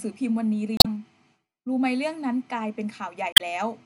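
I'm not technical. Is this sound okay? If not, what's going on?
No. Two short stretches of the file were corrupted, which is called damaged data in a compressed stream. Audio like this is stored in small packed chunks, and when some of those chunks are garbled, the player can't read them properly and has to hunt for the next clean chunk before carrying on. That shows up as a brief chirp, squawk, click or short gap, heard from 0.77 to 0.86 seconds and again from 3.32 to 3.41 seconds.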